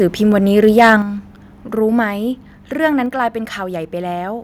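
From 0.58 to 0.93 s the loudest syllables take on a harsh, crackling edge. This is microphone overload, likely from input driven about 5 dB past the converter's ceiling so a small share of peaks are flattened, unlike codec grit, which persists at quieter moments.

At 1.02 s the speech and the background both drop suddenly by about 6 dB and stay lower. This microphone volume stepped down is likely the call software cutting input gain after that distorted stretch, a single fixed step rather than the gradual, level-dependent pumping of automatic gain control.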